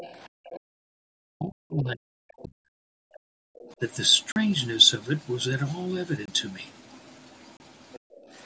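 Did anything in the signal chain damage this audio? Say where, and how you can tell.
Yes. Faint second-voice scraps sit under the talker at 0.00 to 0.28 s, 0.45 to 0.60 s, 7.93 to 7.99 s and 8.16 to 8.20 s, roughly 15 to 30 dB down. That's likely the other side's voice leaking through from the loudspeaker, with the echo canceller in call processing not fully removing it.

Right around those scraps the room tone ducks hard, up to about 40 dB, between 0.29 and 0.63 s and again from 7.99 to 8.28 s, about 200 to 300 milliseconds each time before springing back. That's background gated by the echo canceller, clamping the mic while far-end audio played.

From 0.91 to 3.44 s the talker's own level keeps sagging and breaking up, dropping by as much as around 40 dB across most of that stretch. The likely cause is speech suppressed in double talk: both ends talking, and the canceller pulling everything down because it couldn't separate them.

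Three hard holes sit at 4.32 to 4.36 s (40 ms), 6.26 to 6.28 s (25 ms) and 7.57 to 7.60 s (about 32 ms). These are blocks of digital silence from the driver or buffer stage, most likely where output wasn't filled in time, and the sound cut out with no fade.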